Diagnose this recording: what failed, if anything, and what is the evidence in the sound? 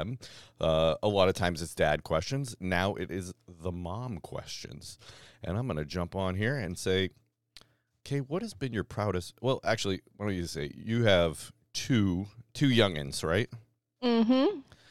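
Nothing failed here; I listened through the speech recording and found no point where any stage of the chain audibly went wrong.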